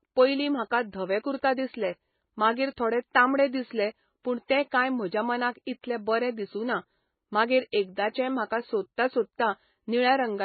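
Speech that, for its whole length, stops dead at about 4.5 kHz and sounds heavily watery and swirly, with s sounds turning metallic and chirpy. This is likely MP3 compression at a very low rate, around 16 kbps. A plain low-pass filter would only dull the top. Here, weak frequency lines also flicker on and off from frame to frame, and that flicker gives it away.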